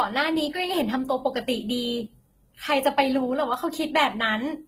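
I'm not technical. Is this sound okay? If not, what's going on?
No. Transcoding between lossy codecs runs throughout the speech. It was likely compressed twice in different formats, so both sets of smeary, swishy artefacts stack together.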